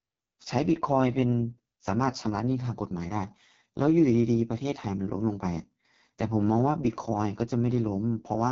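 The whole clip runs through the AMR wideband (HD Voice) codec, rough and raspy throughout and cut off above 6.8 kHz, which fits its lowest 6.6 kbit/s mode.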